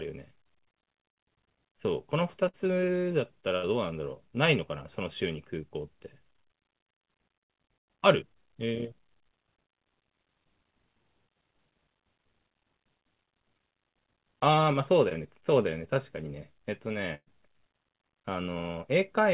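At 2.48 to 2.55 s and again at 3.57 to 3.65 s there is a burst of packet loss. About 60 ms of the speech stream is missing each time. The receiver bridged the gap by extending the last sound for roughly 50 to 57 ms and fading it down. You hear a short held buzz or hiss, and then the speech picks up further on, with that stretch skipped.

At 15.09 to 15.13 s there is a short concealed packet loss of about 20 ms. The decoder continued the preceding sound for around 16 ms and then blended back into the real signal. It sounds like a brief smear or wobble at that point.

At 17.15 to 17.28 s a longer burst of packet loss removes about 120 ms. The concealment stretches the last sound across nearly all of it and fades it. The tail decays into roughly 50 ms of silence before the audio resumes.

Throughout, the call path's narrowband coding means nothing is heard above 4 kHz, which fits G.711 mu-law at 64 kbps.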